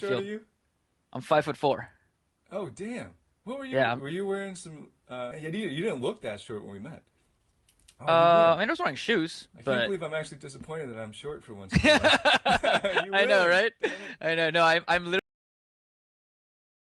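At 5.31 s the sound jumps abruptly forward with no gap, as if a piece had been spliced out. Roughly 0.7 s of audio is missing, and the two sides of the jump meet almost directly. This is a skip ahead. Later audio was already queued when that stretch was discarded, either lost in transit or dropped from an overflowing jitter buffer, so playback resumed further along.

Right after the jump, from 5.45 to 6.10 s, the sound runs fast, about 7% quick, though its pitch stays the same. A second, more noticeable rush follows from 6.52 to 7.53 s at about 12% fast, which sounds hurried. Both are jitter buffer speed-up. The buffer was holding more audio than its target, so the receiver trimmed many short pitch-period-sized slices in succession to shrink the delay. Roughly 50 ms was removed in the first stretch and about 150 ms in the second.

At 15.19 s the sound stops mid-flow and falls straight into digital silence with no natural decay. 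This is a cut-off end. The final buffers were never written or played out, so the audio simply ends where the last delivered block finished.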